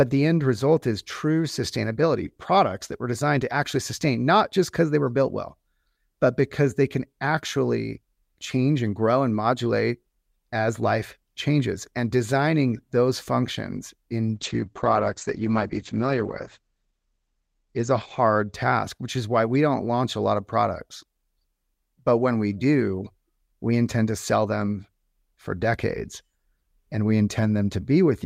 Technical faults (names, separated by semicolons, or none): call bitrate drop